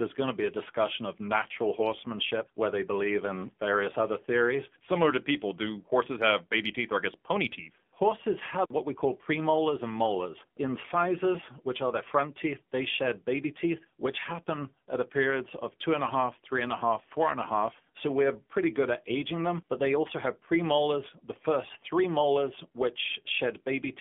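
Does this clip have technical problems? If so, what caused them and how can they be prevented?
Yes. AMR narrowband mobile codec damage is plainly audible throughout. Nothing passes above 3.5 kHz or below 200 Hz. The speech sounds buzzy and synthetic, which fits a low mode near 7.4 kbps. The codec rebuilds each 20 ms frame from a vocal-tract model and a few pulses. To prevent it, record locally or use a wideband, higher-bitrate call path.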